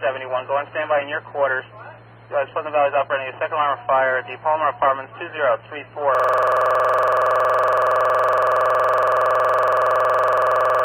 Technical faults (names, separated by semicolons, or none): system hang loop